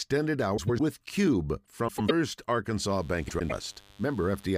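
A speech recording with two kinds of fault. Frames out of order occur at 0.57 to 0.80 s, 1.88 to 2.11 s and 3.29 to 3.52 s. In each, two neighbouring blocks of about 105 ms play swapped, which fits runs of four frames decoded in the wrong order. The result is a garbled flutter, and no time is lost. A mains buzz starts at 2.90 s and runs to the end. It is a steady, raspy 50 Hz buzz with harmonics, around 30 dB below the speech. Sharp switching spikes from a dimmer, rectifier or poor shielding are leaking into the signal path.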